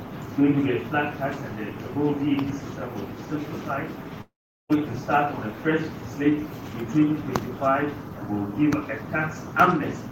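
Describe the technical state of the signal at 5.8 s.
At 5.8 s the signal is intact, with no dropout, distortion, clipping or other fault to be heard.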